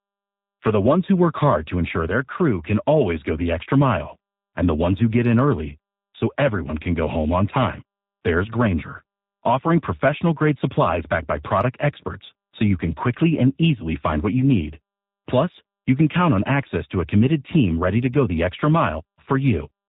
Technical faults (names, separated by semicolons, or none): G.729 codec; VoIP packet loss concealed by the speech codec